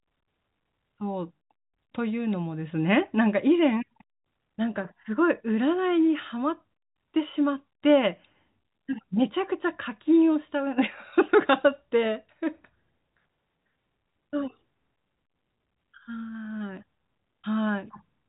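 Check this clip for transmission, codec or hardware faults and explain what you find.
No transmission, codec or hardware faults are audible.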